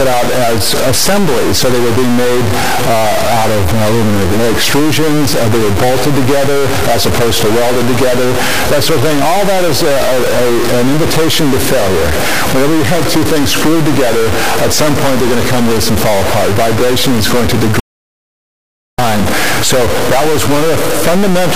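From start to finish the sound carries a grainy or buzzy distortion, and quiet passages fill with noise. A stuck bit is the likely cause, with one data bit fixed and offsetting about half the values.

At 17.80 s the audio cuts out and returns at 18.98 s. This is an audio dropout to silence, likely from lost input. About 1.19 s of sound is gone, with no room tone.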